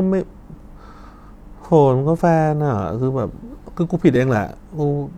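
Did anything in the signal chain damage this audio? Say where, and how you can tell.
Yes. The damage comes from an overlap between stream segments at the network or streaming stage. The segments run about 2 s each, and where two have overlapping time stamps the player trims the shared stretch even though that sound was never duplicated. Short slices of the speech vanish at 2.19–2.21 s and 4.16–4.19 s, about 20 and 35 ms long. The waveform jumps across each gap, heard as a click or tiny skip about 2 s apart.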